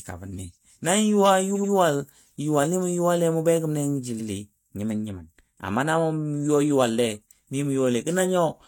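Repeated frames: the same short run of compressed frames was sent more than once, so the decoder replays an 85 ms block. From 1.52 to 1.69 s the speech stutters through two extra plays, adding about 170 ms. From 4.16 to 4.25 s a single repeat adds 85 ms and one more stutter.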